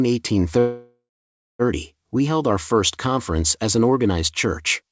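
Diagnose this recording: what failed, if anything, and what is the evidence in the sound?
Speech stretches into a fading buzz from 0.59 s, goes silent, resumes intact at 1.62 s: a call audio freeze, likely delayed network packets emptying the jitter buffer.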